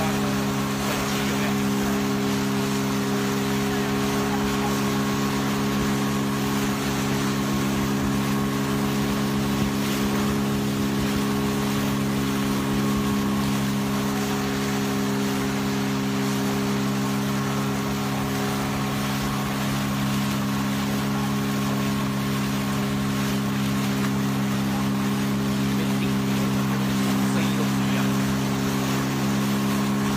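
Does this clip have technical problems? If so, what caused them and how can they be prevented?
No, no technical faults here.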